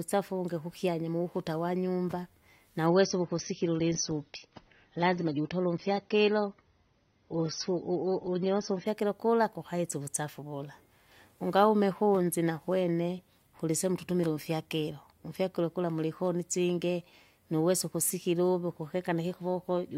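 From 2.86 s, right after "uvungi kukyanya mukuta wanyumba", the speech switches abruptly to an adaptive stream at a lower bitrate. Nothing survives above about 6.3 kHz, and codec artefacts thicken for six seconds. The sound fits a fall from roughly 96 to 24 kbit/s AAC. Full quality returns at 8.86 s, before "kula kukaisa uvusafi".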